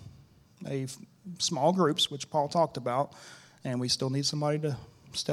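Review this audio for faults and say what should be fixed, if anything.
No faults; nothing needs fixing.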